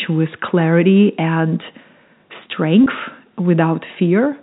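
At 2.84 to 2.86 s there is packet loss with pitch repetition. About 20 ms of speech went missing, which fits two 10 ms packets. The receiver filled the gap by repeating the last pitch period. It sounds like a brief, slightly buzzy held tone in the G.711 telephone-band speech.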